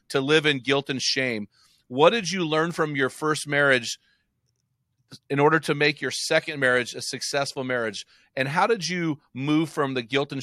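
No technical faults are audible anywhere in this recording.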